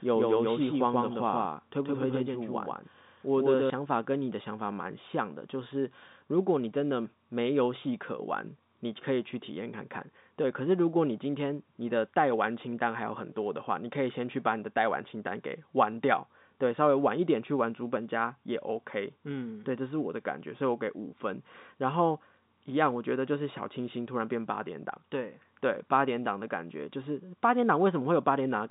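Telephone speech with a doubled audio track from the very start until 3.7 s: a second full-band copy runs roughly 150 ms behind, at about the same level as the original, so everything sounds stuttered and slapped-back without any room tail. At 3.7 s it cuts off abruptly. The likely cause is a second capture of the same signal arriving through a slower path. Throughout, the G.711 telephone line limits the sound to below about 3.8 kHz.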